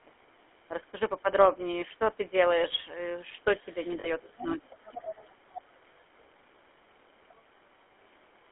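Throughout, the speech has a buzzy, gravelly roughness and a muffled, narrow sound, with nothing above about 3.4 kHz. This is the GSM full-rate codec at 13 kbps, which rebuilds the voice from a vocal-tract model driven by coarse, regularly spaced pulses.

From 1.80 to 1.84 s, and again from 4.00 to 4.10 s, the sound briefly freezes into a rough, metallic ring. These are lost GSM frames. The decoder fills each gap by repeating the last good frame's settings, with the level falling from the second lost frame on. The first gap covers about one frame, the second about two.

A second voice sits faintly under the speech from 3.59 to 3.87 s, far below the main talker. It returns much more clearly from 4.30 to 5.32 s and briefly from 5.50 to 5.62 s, at roughly 15 dB down. This is the other side's voice leaking through, likely loudspeaker echo that the echo canceller left in the microphone signal.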